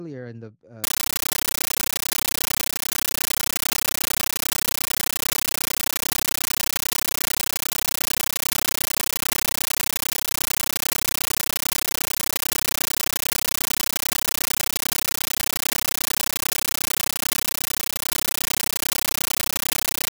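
From 0.84 s to the end, an undecoded AC-3 stream replaces the speech: a compressed stream played as audio. It is heard as loud chattering static, with 13.3 ms noise bursts repeating 31.25 times a second.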